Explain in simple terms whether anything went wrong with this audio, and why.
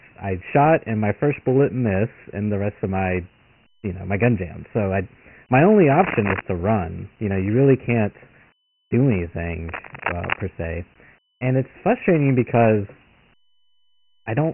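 Two things went wrong. The speech was stored as Dialogic VOX ADPCM, the cheap 4-bit format used for phone menus and voicemail. Nothing above 3 kHz survives, which points to a 6,000-samples-a-second recording. The damage is heavy, so the voice sounds muffled and a gritty hiss trails it.

There are also two bursts of cable scratch noise. The first runs from 5.89 to 6.42 s, after "so i my only" and before "to run you know". It is roughly as loud as the speech. The second runs from 9.68 to 10.44 s, just before "se and it's frustrating", and is a bit quieter. Both sound like sudden scratching or rustling. The likely cause is a worn cable, plug or knob being moved, which makes its electrical contact flicker.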